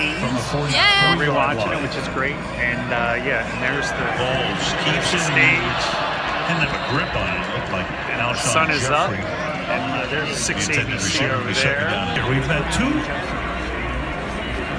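No technical faults can be heard anywhere in this recording. Nothing in the sound calls for a timestamp or a closer look.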